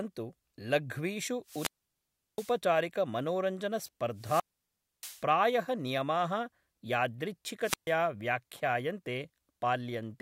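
Speech, hit by wireless microphone squelch dropout three times: 1.44–2.57 s, 4.15–5.25 s and 7.61–7.94 s. Each time the radio link fades, hiss creeps up, then the receiver's squelch mutes everything for about 0.72 s, 0.63 s and 0.14 s respectively.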